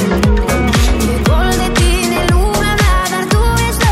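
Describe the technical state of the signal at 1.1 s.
At 1.1 s the signal is intact, with no fault to be heard.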